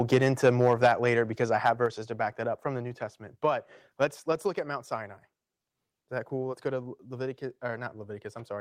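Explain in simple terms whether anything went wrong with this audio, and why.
From the very start to about 1.09 s, and again briefly around 1.65 to 1.7 s, the loudest parts of the speech sound harsh and crackly, as if the tops of the sound were being sliced off. This is microphone overload, likely caused by the microphone's input being set too high, so the strongest peaks hit a hard ceiling and get flattened. Unlike a simple volume change, this adds a rough, distorted edge to the sound.

At 0.87 s, 1.86 s and 4.32 s, everything suddenly becomes a little quieter in one abrupt step, with the voice and the background dropping together. This is the microphone volume being stepped down, likely by the call software reacting to the earlier overload and turning the input down. The drop at 0.87 s comes during the first crackly stretch and the one at 1.86 s just after the second, which fits that reaction.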